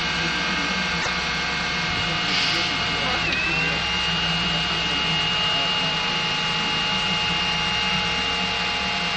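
At 0.98 to 1.08 s, damaged data in the compressed stream makes the decoder lose frame sync, producing a brief glitch: a jagged waveform discontinuity.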